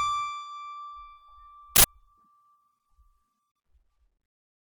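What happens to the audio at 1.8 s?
At 1.76 s the music is replaced by a harsh, loud blast of digital noise that lasts until 1.84 s. That's an uninitialised buffer: an 80 ms block got played before any audio was written into it, so whatever junk sat in memory came out as samples.

Underneath it, the music has a watery, swirly quality, with dull treble and smeared attacks. That's most likely MP3 compression at a low bitrate, around 48 kbps, where the encoder trims the top end and lets weak frequency detail flicker in and out.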